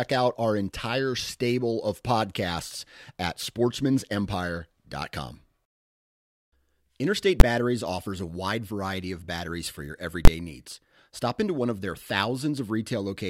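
A speech recording interrupted twice by sharp, very loud bangs. The first, at 7.40 s, is a single hard click. The second, from 10.25 to 10.28 s right after "of batteries for your", is a burst about twice as long. Both are invalid numbers at full scale: a calculation produced infinite or invalid values that were forced to maximum level for a whole processing block. The 11.6 ms and 23 ms durations fit 512-sample and 1024-sample blocks.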